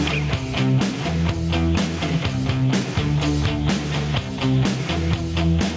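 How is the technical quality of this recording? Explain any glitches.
The technical quality is poor because of gain pumping throughout the clip. The input gain was likely set far too high, so a fast limiter clamps down on every loud sound. The gain swings by roughly 10 dB, leaving everything squashed. The call's microphone processing, with nothing above 8 kHz, sits underneath this.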